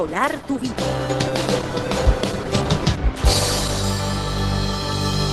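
From 0 to 3.84 s the sound is dull, with nothing above 12.1 kHz and stronger codec artefacts, which fits an adaptive stream starting at a low bitrate, around 16 kbit/s Opus. It then jumps abruptly to fuller quality, consistent with 64 kbit/s, with no gap or dropout at the switch, unlike a stall or reconnect.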